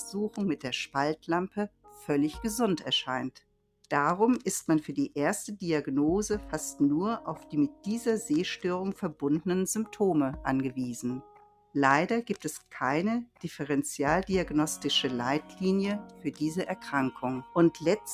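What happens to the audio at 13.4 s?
At 13.4 s the sound falls inside a stretch of sound cut by the noise suppressor, from 13.26 to 13.44 s. The suppressor judged this portion to be noise and pulled it down by about 18 dB, so it briefly sinks. On a waveform the envelope narrows abruptly for that fifth of a second, and a spectrogram shows the energy thinning across the band before recovering.

That dip comes from a noise suppressor applied to music or sounds, active across the whole clip. It treats held tones and decays as noise, so the level swings by around 10 dB. Attacks pass while sustains sag, giving a pumping, thinned quality. On a spectrogram the sustained partials fade in and out.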